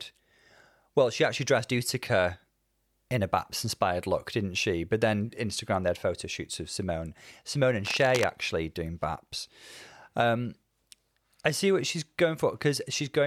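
From 7.85 to 8.3 s a burst of cable scratch noise sits over the speech: dense, irregular crackle and rustle around 10 dB below the signal. The likely cause is a worn cable or connector being moved, its contact resistance fluctuating rapidly.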